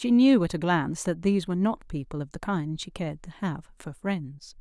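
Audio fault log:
Nothing faulty turns up anywhere in this speech recording. There is no event to mark with a time, so the log holds this single line.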